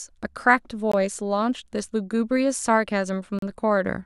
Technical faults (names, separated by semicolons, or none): Bluetooth stall